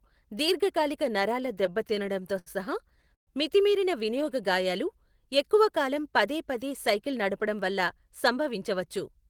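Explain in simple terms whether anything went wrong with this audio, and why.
Between 1.41 and 2.48 s, repeated stalls (stutter) occur. The audio data kept reaching the listener's end too late, so the small waiting store of incoming sound ran dry ten separate times. Each time the receiver stretched the last bit of sound to cover the wait, adding 165 ms in all, with the longest gap 74 ms. No speech is lost, but the passage leading into "సహా మితిమీరిన వినియోగ గాయాలు" drags and stutters.

At 3.15 to 3.29 s there is a call audio freeze. The audio most likely got held up on its way, and the store of incoming sound emptied completely. For 120 ms nothing could be played, so there is a short silence. When the data arrived, the speech picked up exactly where it had stopped, just before "మితిమీరిన వినియోగ గాయాలు ఎక్కువ". The pause is added and nothing is cut out.

From 5.89 to 7.15 s a jitter buffer speed-up happens. 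The receiver had built up more stored sound than it wanted, which adds delay. To catch up, it snipped out many tiny slices, about 70 ms in total. The stretch after "మితిమీరిన వినియోగ గాయాలు ఎక్కువ" and up to "నడపడం వల్ల" therefore plays at about 105% speed. The pitch stays the same, so it sounds slightly hurried.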